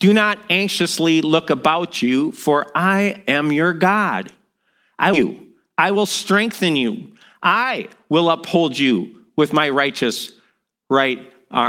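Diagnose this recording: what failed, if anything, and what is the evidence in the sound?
Either the network or the jitter buffer threw away a stretch of queued speech, the buffer probably on overflow: a skip ahead at 5.13 to 5.26 s. Roughly 0.7 s of speech is missing, and the two sides are spliced almost directly with no silence, so the talker seems to jump forward.

The jitter buffer was still holding more speech than its target and trimmed pitch-period-sized pieces to cut delay, a jitter buffer speed-up. Speech runs 5% fast from 5.69 to 6.79 s and 7% fast from 7.25 to 9.73 s, at unchanged pitch, losing roughly 70 ms and 200 ms, and sounds hurried.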